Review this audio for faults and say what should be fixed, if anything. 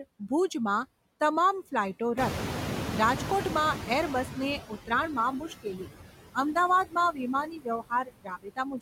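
Noise suppressor artifacts run through the whole speech clip. The suppressor pulls steady-noise bands down by about 14 dB frame by frame. A spectrogram shows blotchy, flickering background texture, and the waveform floor dips between phrases.

The noise suppressor is catching up from 2.17 to 4.71 s. Room noise jumps by about 16 dB at around 2 s, and the noise estimate needs about 2.5 s to adapt before reaching roughly 13 dB of reduction. The spectrogram shows bright broadband noise that fades gradually, and the waveform floor tapers down over that span.

Speech is cut by the noise suppressor at 4.59–4.91 s, 5.40–5.88 s, 6.85–6.96 s and 7.46 s to the end. The suppressor mistakes quiet speech for noise, with drops of about 14, 16, 16 and 22 dB. The last stretch loses well over half a second of speech. On a spectrogram these appear as sudden holes in the harmonics and high consonant energy. 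In the waveform the envelope shrinks abruptly.

To prevent these faults, use a faster-adapting noise estimate and gentler suppression with a speech-presence guard so that soft speech is never attenuated.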